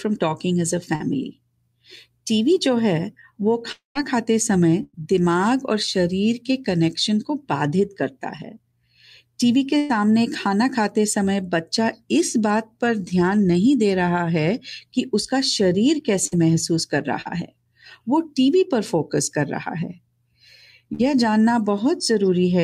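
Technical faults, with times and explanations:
0.95–1.02 s, short concealed packet loss: about 40 ms of audio arrived too late, so the receiver extended the preceding sound, leaving a brief smear before normal speech resumes.
3.72–3.97 s, long network dropout: the last sound is continued and fades, ending in about 140 ms of silence within roughly a quarter second of fill, with some 240 ms of speech gone, likely from a stall in the network path.
4.83–4.95 s, burst of packet loss: about 100 ms of consecutive packets went missing. The receiver continued the last sound, turning it down as it faded, with a 20 ms silent gap before speech returns.
9.77–9.91 s, burst of packet loss: about 120 ms of audio never arrived. The concealment holds and fades the previous sound across the whole gap without falling silent, then speech picks up further on.
16.27–16.33 s, short concealed packet loss: about 40 ms of audio was lost and concealed by extending the last sound, heard as a brief wobble in the speech.
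17.21–17.27 s, short concealed packet loss: another 40 ms of audio was lost and covered by extending the preceding sound, which briefly blurs the speech before it blends back in.
20.93–21.01 s, burst of packet loss: about 60 ms of audio arrived too late to play. The receiver stretched and faded the last sound across the short gap, and the missing stretch is skipped.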